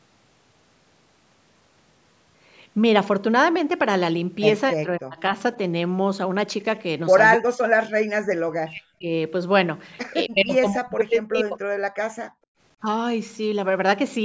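From 4.71 to 5.36 s, 7.36 to 7.76 s, 8.11 to 9.08 s and 10.27 to 11.59 s the speech drops away in chunks, likely speech suppressed in double talk, with the canceller muting the talker along with the echo. Waveforms show gaps falling roughly 40 dB; spectrograms show the harmonics vanishing.

At 12.28 to 12.59 s the room sound is briefly pulled down, background gated by the echo canceller while the far end played. The level falls by about 32 dB, a flat trough in the waveform and a blank band across the spectrogram before the noise floor returns.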